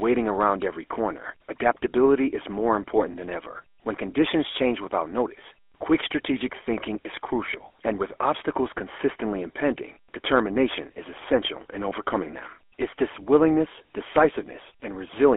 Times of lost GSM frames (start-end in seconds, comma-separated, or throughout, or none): 3.12-3.16